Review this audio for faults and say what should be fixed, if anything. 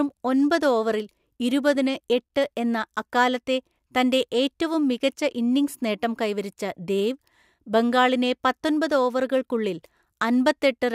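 No faults; nothing to fix.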